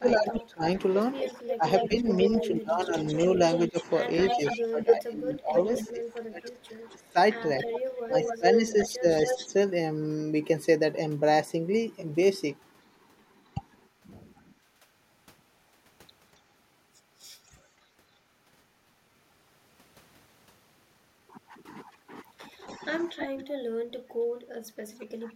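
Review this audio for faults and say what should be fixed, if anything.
Echo leak: a delayed copy of the speech trails the talker by about 260 to 275 ms, from 0.08 to 5.9 s and 6.9 to 9.49 s at about 5 dB below the speech, faintly at 17.45 s, and from 22.67 to 23.28 s at about 10 dB down. The likely cause is a far-end echo canceller that left part of its loudspeaker's pickup in the signal it sent back. Better acoustic echo cancellation at that end, or a headset in place of the loudspeaker, would prevent it.

Speech suppressed in double talk: the talker's level dips by up to about 20 dB in pieces totalling roughly four seconds between 0.0 and 7.16 s, briefly between 8.07 and 9.5 s, and by up to about 25 dB for under a second between 23.28 and 25.29 s. These drops most likely come from an echo canceller that could not tell near speech from echo while both sides talked, and so turned both down. 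A canceller that keeps full duplex during overlapping talk would prevent it.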